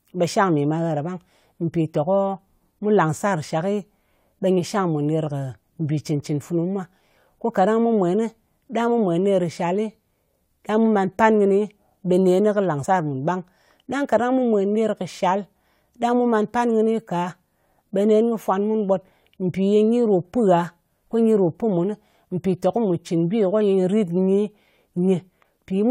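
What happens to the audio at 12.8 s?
At 12.83 s, just after "kɨ làng", the decoder skips compressed frames: about two whole frames, roughly 50 ms of audio, either never reached it or were rejected as damaged. The frame length of 23.2 ms fits a codec working in blocks of that size. The speech lurches forward by that gap, leaving an abrupt jump at the join.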